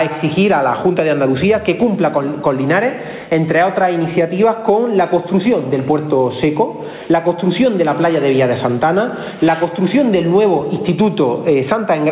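From start to finish the level seems to breathe, with a swing of roughly 15 dB, and loud and soft passages sit squashed close together. This is gain pumping, likely caused by input gain set far too high for the microphone, with a fast limiter or compressor clamping down on each peak and releasing in the pauses. Through the call path nothing is heard above 4 kHz, which fits a G.711 mu-law codec at 64 kbps.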